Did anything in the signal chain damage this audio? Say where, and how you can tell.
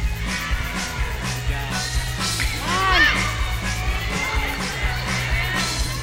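Yes, DECT cordless phone buzz in the analogue wiring, from start to finish: a steady, thin 100 Hz buzz, well below the signal. A nearby DECT handset's 10 ms radio bursts are rectified by the circuitry. Unlike smooth mains hum, its many sharp harmonics give a gritty buzz.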